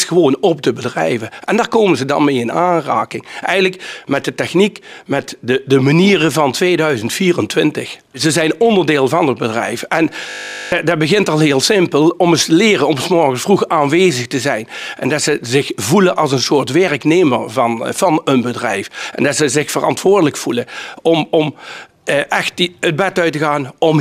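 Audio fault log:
10.30–10.72 s: system hang loop. The playback path stalled while the output hardware kept replaying the same 20 ms stretch of its ring buffer, repeating it 21 times. Because the looped piece is so short, the repeats fuse into a steady buzz at 50 Hz rather than a distinct stutter, which points to a buffer of about 20 ms. Roughly 0.4 s of the real audio is missing, replaced by the buzz.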